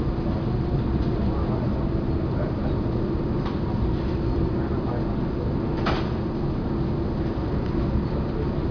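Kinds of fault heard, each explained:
No faults can be heard.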